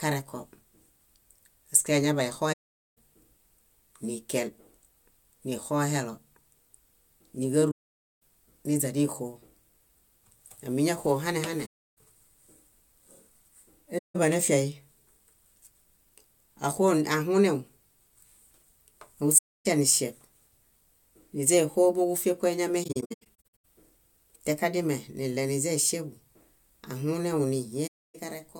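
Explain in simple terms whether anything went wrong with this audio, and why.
The speech briefly drops to silence at 2.52, 7.71, 11.65, 13.98, 19.38 and 27.87 s, each gap lasting 0.17 to 0.51 s. Between 22.83 and 23.65 s it breaks up into several short holes. This is AAC frame loss with muting: chunks of audio were lost and the player filled them with silence. Each gap fades out and back in softly.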